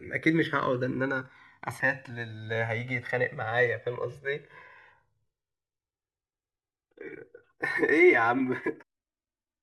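From the start the speech carries a slow flanging sweep: the channels are drifting apart, recorded on clocks that disagree by a few hundred parts per million, so their offset creeps to roughly 3 ms. Unlike a fixed delay, the mono comb notches keep moving. At 1.79 s, 3.86 s and 8.81 to 8.83 s, damaged data in the compressed stream makes the decoder lose frame sync and hunt for the next header. Each time there is a brief glitch, abrupt and isolated, unlike a steady codec artefact.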